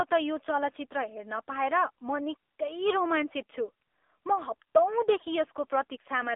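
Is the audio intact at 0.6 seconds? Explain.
No. The AMR narrowband mobile codec at 7.4 kbps runs through the whole clip. Its vocal-tract model leaves the speech buzzy and synthetic, with nothing above 3.8 kHz, unlike a clean band-limiting filter.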